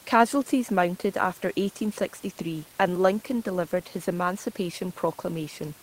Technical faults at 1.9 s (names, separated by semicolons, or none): none